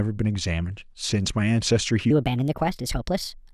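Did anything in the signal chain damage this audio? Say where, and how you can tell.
Yes. From 2.11 s to the end at 3.53 s, a section at the wrong speed: the speech runs 1.32 times too fast, pitch rising about five semitones as tempo hurries. Pitch and speed shift together, likely from a sample-rate or clock mismatch at editing or playback.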